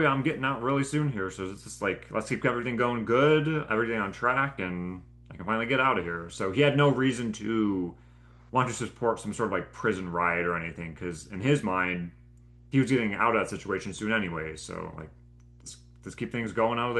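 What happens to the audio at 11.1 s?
At 11.1 s the speech carries mains hum from a ground loop or transformer, a steady 60 Hz tone roughly 25 dB down, present throughout, pitched and constant unlike broadband rumble.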